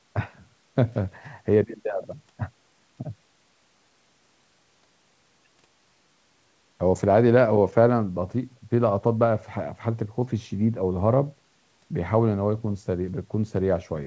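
A speech recording with nothing technically wrong with it.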